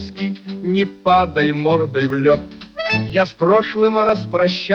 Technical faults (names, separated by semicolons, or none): periodic USB or driver dropouts